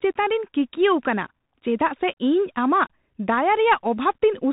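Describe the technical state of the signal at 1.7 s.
At 1.7 s, as throughout, the speech passes through a Bluetooth CVSD headset codec. Its one-bit adaptive-step coding, likely at 64 kbit/s, leaves nothing above 3.8 kHz, with plainly audible granular hiss and scratchy sibilants.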